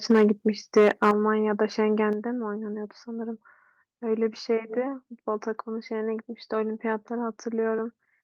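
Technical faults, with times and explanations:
0.10–0.32 s and 0.76–1.11 s, microphone overload: the loudest syllables pick up a harsh, crackly, flattened edge. The first burst goes about 4 dB past full scale and the second about 7 dB, so in that second stretch roughly a tenth of the samples are squared off. The input gain was likely set too high, so the peaks slam into the converter's ceiling and get their tops sheared off, and that's where the grit comes from.
0.12 s, 1.11 s and 2.13 s, microphone volume stepped down: each time the whole level, voice and background together, drops abruptly, by about 2 dB, then about 6 dB right as the second overload ends, then about 5 dB. The timing points to the call software likely reacting to the clipping and knocking the device's input volume down in single jumps. That's why you hear sudden steps in loudness instead of a smooth fade.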